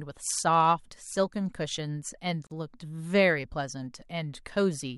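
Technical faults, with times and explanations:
2.47 to 2.51 s, gap at a join of encoded pieces: a 42 ms silence cuts into the speech, which resumes where it stopped, because untrimmed encoder delay and final-frame padding sit at the join. The waveform drops flat between steep, slightly smeared edges; the spectrogram shows a blank vertical band.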